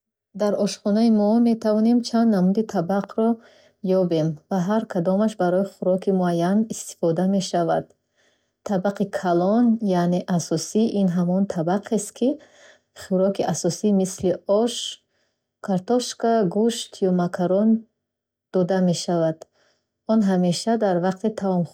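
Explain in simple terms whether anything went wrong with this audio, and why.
At 3.04 s, just after "мо метавонем чанд намуди", there is one loud pop, a single sharp click a bit louder than the speech itself. The speech carries on underneath it. A sudden electrical jolt, likely from a plug, switch or static, caused it.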